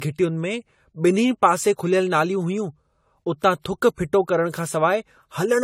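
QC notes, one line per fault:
Throughout: generation loss; swirly, hollow speech with smeared attacks, likely from about five re-encodes fitting 64 kbit/s AAC; spectrogram shows scattered holes, blurred onsets.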